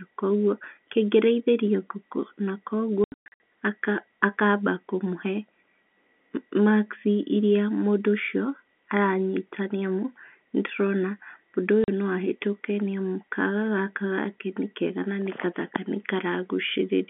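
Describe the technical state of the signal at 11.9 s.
Packet loss filled with silence runs from 11.84 to 11.88 s: a 40 ms hole, which fits two lost 20 ms packets replaced by silence. The speech drops out abruptly, with hard edges, over the narrow telephone-band G.711 sound.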